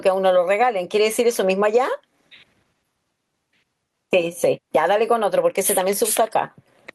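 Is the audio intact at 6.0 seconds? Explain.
No, at 6.0 s you're still hearing the gain pumping that runs through the whole speech clip. The level lurches by something like 20 dB, so loud and quiet parts sit squashed close together. It's likely the input gain was set far too hot and a fast limiter or compressor kept clamping down on each peak.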